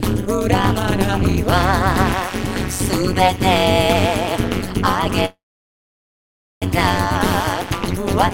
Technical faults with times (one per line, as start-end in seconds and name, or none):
0.00-8.33 overlap-add ripple
0.79-4.20 timecode bleed
5.25-6.64 call audio freeze